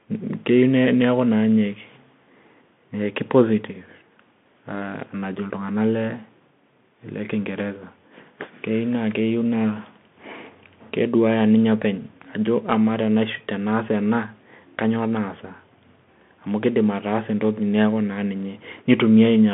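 Throughout, the speech passes through a Bluetooth CVSD headset codec. Its one-bit delta coding, which fits a 64 kbps link, confines the line to roughly 150 Hz to 3.5 kHz with nothing above 3.8 kHz. The result sounds muffled, with scratchy s sounds and granular hiss beneath.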